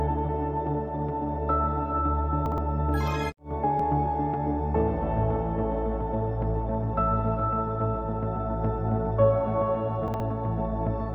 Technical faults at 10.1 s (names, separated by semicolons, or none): chunks out of order